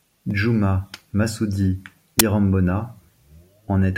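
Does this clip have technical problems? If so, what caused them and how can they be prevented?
Yes. At 2.19 s the speech is hit by an uninitialised buffer: a block of about 12 ms, which fits a 512-sample buffer, was played before audio was written, so leftover memory came out as a loud crack. Unlike a dropout or single click, it adds loud foreign noise for a full block. Filling or zeroing each buffer before handing it to playback prevents this.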